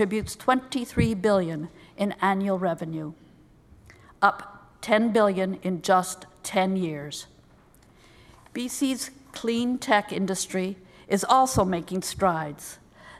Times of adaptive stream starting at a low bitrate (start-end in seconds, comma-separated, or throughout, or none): none